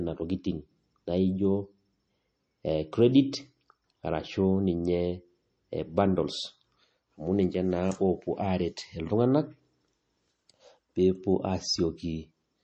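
From start to finish the speech carries plainly audible MP3 compression damage, likely from a low bitrate around 32 kbps. Nothing remains above 8.3 kHz. Weak frequency detail flickers between frames, giving a watery, swirly texture. S sounds turn metallic, and attacks smear.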